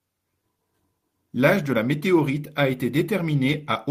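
No technical faults are audible anywhere in the speech recording.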